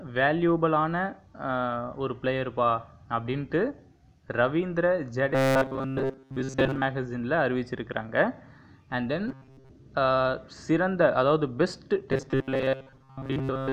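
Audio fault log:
5.32–6.85 s, 9.28–9.70 s, 12.12–13.73 s: robotic sound from repeated short buffers. Rigid metallic 133 Hz buzz, likely from looping a roughly 7.5 ms chunk over most of the audio.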